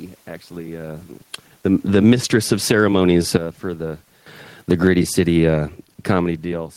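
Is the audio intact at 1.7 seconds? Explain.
Yes, the audio is intact at 1.7 seconds, with no technical fault at that point.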